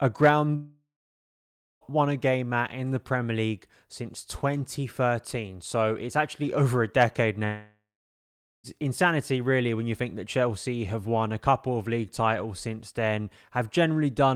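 A speech clip with two long network dropouts, likely. At 0.55–1.84 s and 7.45–8.67 s, a fading buzz gives way to near-silence. Speech resumes at "won a game at" and "insanity really when you", with about 1.2 s lost each time.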